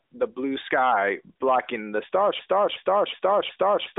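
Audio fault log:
2.39 s to end: broken-record loop. Playback likely stalled and resent its last 0.37 s fragment four times, so one snippet of speech stutters and the remaining audio is lost.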